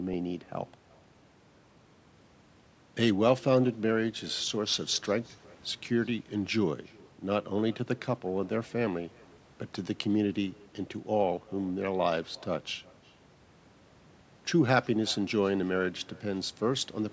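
Speech, with echo with no canceller running throughout. Every phrase returns roughly 0.4 s later, about 27 dB down, as a faint, thinner copy. The far end's loudspeaker leaks into its microphone, and nothing cancels it. The call microphone processing limits content to 8 kHz.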